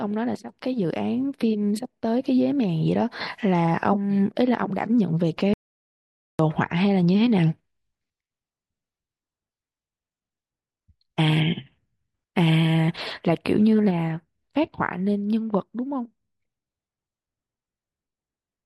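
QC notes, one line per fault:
5.54–6.39 s: audio dropout to silence. Speech cuts off abruptly mid-flow and resumes after 0.86 s of dead silence with no room tone. Unlike a natural pause or a gate's tail, nothing fades. The input was likely lost while recording continued writing zeros.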